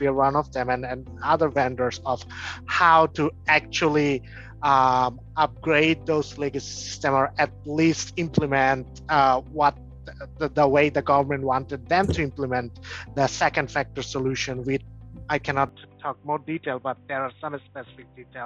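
At 15.69 s the audio abruptly turns dull and boxy and stays that way to the end. Nothing above 3.8 kHz survives, the level drops by about 5 dB, and a faint new background noise sits well beneath the signal. There is no gap at the change. The input was likely switched to a poorer device, a second microphone or a headset's call profile, whose narrower band, different tone and own noise replaced the original path mid-recording.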